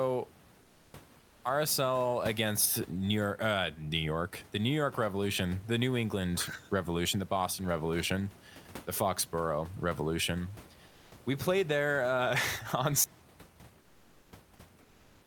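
A speech clip where the sender's voice activity detection, likely Opus-style discontinuous transmission, stops sending during pauses, so comfort noise in place of the background is heard at 0.61–0.93 s, 1.19–1.43 s, 10.87–11.11 s (just before "we played there uh") and 13.81–14.31 s. The real room noise, about 25 dB below the speech, gives way to flat synthetic hiss, about 3, 5, 0 and 4 dB quieter respectively. An audio dropout to silence then begins at 13.04 s and runs to the end, as though the input was lost. The sound cuts off and silence remains.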